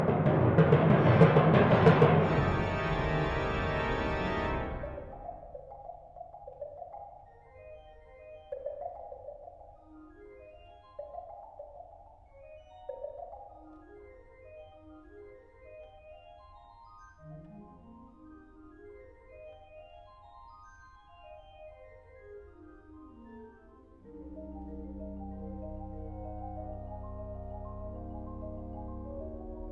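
No technical faults are audible anywhere in the recording.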